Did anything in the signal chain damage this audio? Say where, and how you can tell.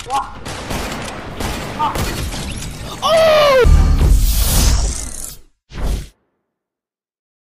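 Yes. Video or display buzz from 1.31 to 5.03 s, entering at the analogue wiring: a 59.94 Hz field-rate buzz with hash above it, around 30 dB below the signal, plus a 15.7 kHz line-rate whistle. That whistle separates it from mains hum.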